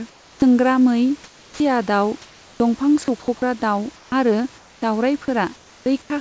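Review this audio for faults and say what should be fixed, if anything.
Comfort noise in place of the background shows up four times: 0.10 to 0.42 s, 1.24 to 1.60 s, 3.96 to 4.82 s and 5.56 to 6.10 s. In these gaps the real room background turns into a flat, featureless hiss, about 8 dB quieter in the first gap and about 5 dB quieter in the second. That's likely discontinuous transmission: the sender goes quiet between phrases and the receiver synthesises filler noise.

The speech onset is clipped by the voice detector at 0.37 s and again at 1.52 s, where 50 ms and then 80 ms of the start is missing. Those first moments are lost under comfort noise, so speech pops in abruptly without its soft attack. The cause is likely a detector that's slow to notice sound returning.

From 2.22 to 3.42 s the sound is chopped by the voice detector, with about 540 ms in total swapped for comfort noise. The detector keeps toggling between sending and not sending, so quieter bits flicker out. 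A likely cause is a detector threshold sitting too close to the speech level.

Right at the end, from 6.02 to 6.10 s, sound is dropped by the voice detector. About 50 ms of trailing sound is treated as background and replaced with steady noise. The likely reason is that the detector hears that quiet tail as silence and cuts it.

The band stopping at 8 kHz fits a 64 kbit/s G.722 call path. To fix all of this, turn off DTX and VAD on the sender, or at least add more hangover and look-ahead to the detector and lower its threshold.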